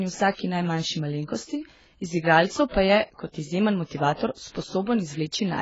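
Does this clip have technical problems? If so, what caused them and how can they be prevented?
Yes. Heavy AAC compression runs throughout: nothing sounds above 7.6 kHz, so the speech is dull, with smeared, warbling sibilants. This is likely AAC-LC at a very low bitrate, around 16 kbps, starving the quantiser. Encoding at 64 kbps or more for speech prevents it.

Pre-echo occurs at 2.69 to 2.74 s, just after "najmanjši malenkosti iz igralcev" and before "pa je", and again at 4.14 to 4.19 s. Quantisation noise spreads about 51 and 57 ms ahead of sharp onsets, leaving hiss and softened attacks. A higher bitrate with working block switching prevents this.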